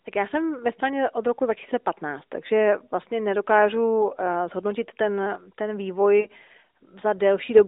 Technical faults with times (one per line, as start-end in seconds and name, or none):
6.20-6.28 lost AMR speech frames